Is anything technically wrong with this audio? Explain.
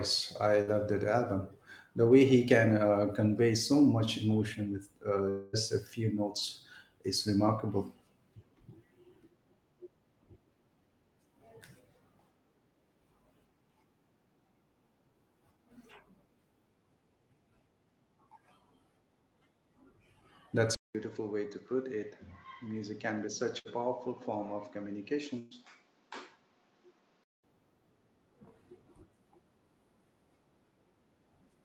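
Yes. The speech clip has three kinds of fault: repeated bursts of packet loss, a longer network gap, and a change in input quality partway through.

A burst of packet loss occurs three times: at 0.61–0.70 s, just before "that album"; at 23.59–23.68 s; and at 25.39–25.54 s. In each case a run of packets failed to arrive in time to play. The receiver extended the last sound and faded it, filling about 60 ms in the first two cases and 120 ms in the third, then resumed with that stretch missing. Each one is heard as a brief smeared buzz or hiss followed by a small jump.

From 5.29 to 5.56 s, just before "a few notes is", there is a longer gap whose likely cause is a long network dropout. About 240 ms of audio never arrived. The receiver covered roughly 236 ms of it by continuing and fading the last sound, so there is no true silence. What you hear is a stretched, decaying buzz or hiss, and the speech then picks up with a section skipped.

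From 20.75 to 27.44 s the sound changes character. The likely cause is the input being switched to a poorer device. There is about 200 ms of silence at the switch. After it, nothing is present above 7.6 kHz, so the speech turns duller. The level drops by roughly 10 dB, and a new noise floor sits around 35 dB below the speech. The brighter, cleaner sound returns at 27.44 s.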